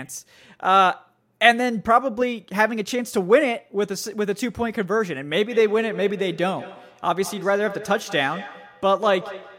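From 5.47 s to the end, there's feedback echo between two devices. A second device in the room replays the call, and the first mic picks it back up, which its echo canceller can't remove. Speech returns roughly every 200 ms, thinner and ringing, at about -15 dB.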